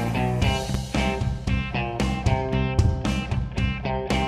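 A loud pop at 0.74 to 0.77 s cuts into the sound: one short, sharp burst that stands well clear of the surrounding audio, around 10 dB above it, while the underlying sound carries on beneath it without a break. The likely cause is a sudden electrical step or spike, such as a plug being seated, a switch, a static discharge or a driver glitch, entering the signal path and being shaped by the circuitry after it into a brief thump.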